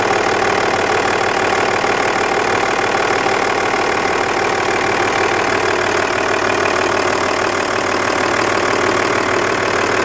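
A resampler restarted on every block runs from 0.69 to 8.69 s. Each short block was converted in isolation, leaving a small error at every block edge. These errors come at 100 Hz, which fits 10 ms blocks, and form a steady buzz heard only while sound is present.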